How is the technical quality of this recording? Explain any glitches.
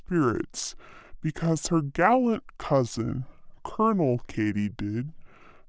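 The recording has one fault throughout: a wrong sample rate, so the whole speech clip plays slow and low.

From start to finish, every sample is clocked out at two-thirds of the intended rate without conversion, which fits 24 kHz material played at 16 kHz. Speed drops to 0.667 and pitch falls about 7 semitones together, so the voice sounds deep and draggy. On a spectrogram, harmonics and formants sit compressed downward and every event stretches wider. On the waveform, each cycle and syllable looks drawn out by 1.5 times.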